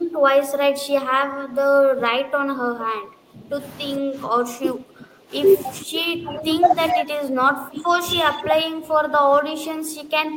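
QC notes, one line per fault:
0.00–3.59 s, 3.97–5.34 s, 5.80–6.75 s and 6.92 s to the end: speech suppressed in double talk. The speech repeatedly dips by up to about 15 dB, thins at the top and breaks up in pieces, most likely because an echo canceller could not separate this talker from the overlapping far-end loudspeaker echo and turned the near side down. On a waveform the envelope pumps down in irregular bites; a spectrogram shows the upper bands fading out in patches across these spans.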